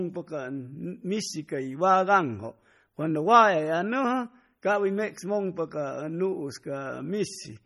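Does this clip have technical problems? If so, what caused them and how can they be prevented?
Yes. Throughout the speech, the sound is watery, with swirling, metallic s sounds. This is likely heavy MP3 compression, whose sound fits about 32 kbps, too few bits for the encoder. Encoding at a higher bitrate, or keeping a lossless copy, would prevent it.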